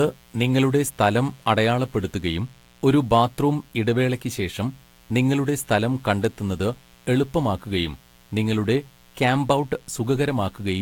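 A speech clip with two faults running through its whole length. The first is mains buzz. It is a steady, raspy buzz built on 60 Hz, sitting around 30 dB below the speech. Sharp switching spikes from a dimmer, rectifier or poor shielding repeat twice per mains cycle. Their harmonics climb well into the kilohertz range. The second is generation loss. The speech sounds swirly, smeared and hollow, and consonant attacks are blurred. Nothing is present above 19.3 kHz. The likely cause is about four rounds of lossy re-encoding, which fits a Vorbis chain near 80 to 90 kbit/s. Each pass quantised afresh on a shifted frame grid, so noise and spectral holes stacked up.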